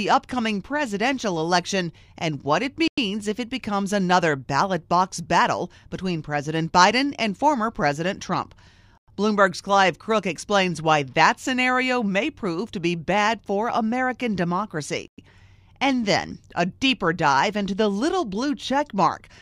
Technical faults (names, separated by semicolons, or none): gap between chunks